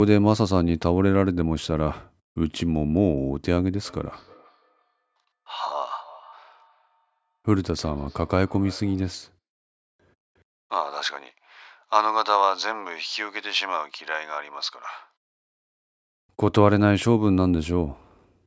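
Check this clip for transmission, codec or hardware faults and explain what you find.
One fault shows up: a feedback echo between two devices, from 3.84 s to 9.32 s. The speech returns at a steady interval of roughly a third of a second, with each repeat thinner and more ringing, peaking about 25 dB below the direct speech. A second device in the room is replaying this microphone's signal, the microphone picks it up again, and the echo canceller cannot remove sound it did not play itself. The call microphone processing cuts everything above 8 kHz.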